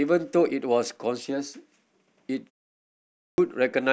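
At 3.18 s, speech resumes after a pause of about 0.76 s and its opening is missing. This is a clipped start after a pause. The output path went idle during the silence and needed time to wake and lock again. By the time it was ready, about 200 ms of sound had gone, up to 3.38 s. The word therefore begins abruptly, without its first sounds.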